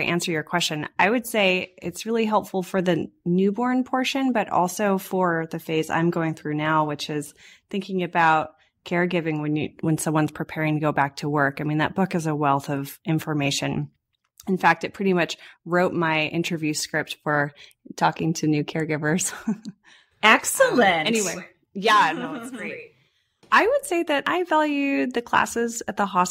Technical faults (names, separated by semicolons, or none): none